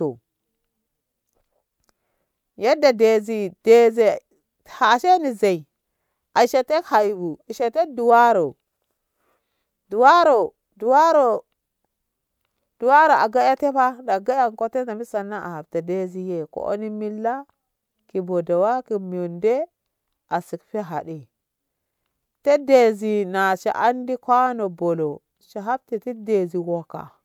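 Across the whole speech recording, no technical faults can be heard at any point.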